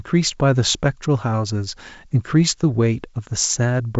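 No technical faults can be heard anywhere in the speech. It comes over a G.722 wideband telephone path at what sounds like the full 64 kbit/s rate, with the top of the band stopping near 7.7 kHz and any coding hiss faint at most.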